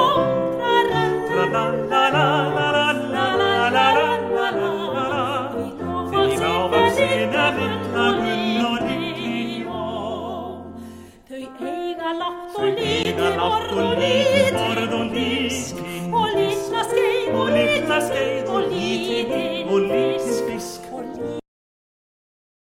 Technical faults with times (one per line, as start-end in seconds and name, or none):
13.03 block of digital silence